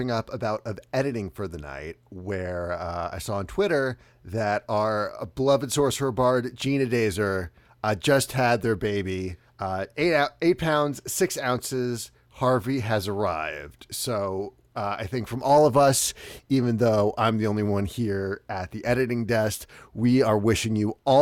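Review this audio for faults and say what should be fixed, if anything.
Nothing here needs fixing, since no technical faults turn up anywhere in this recording of speech.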